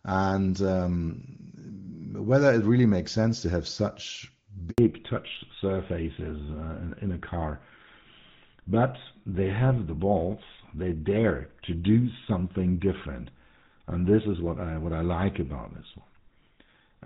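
At 4.7 s the speech cuts out abruptly, fading within a few tens of milliseconds to silence for 80 ms until 4.78 s. This is a handover gap: the call switched networks, and no speech frames arrived during the changeover, so that stretch of speech is lost.

From 4.78 s to the end, the voice turns duller, more muffled and rougher, with nothing above 4 kHz. This is a fallback to narrowband. Before the gap, the clean, wideband sound fits AMR-WB HD Voice at its top rate of 23.85 kbit/s. Afterwards, the band-limited, gritty tone points to GSM full rate at 13 kbit/s, which cannot carry the upper speech frequencies the wideband codec preserved.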